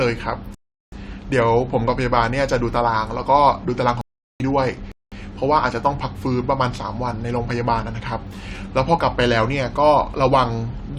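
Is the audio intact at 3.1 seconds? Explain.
Yes, the speech at 3.1 seconds is intact, with no dropout, click, distortion or other fault at that moment.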